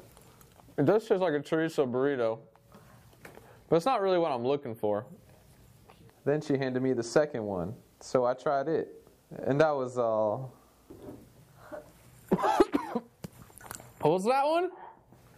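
Nothing is technically wrong with this audio.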